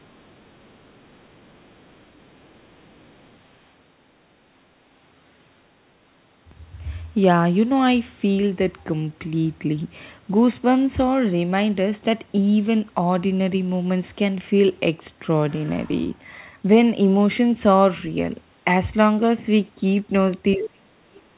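A speech clip. From 0.0 to 3.37 s, the other side's voice leaks through, very faint and far below the talker. An echo canceller likely left loudspeaker sound in the microphone. From 20.55 s to the end, speech is suppressed in double talk. The talker's voice drops very deeply, likely because the canceller muted both sides at once. The audio stops at about 4 kHz, which fits a narrowband G.711 call path.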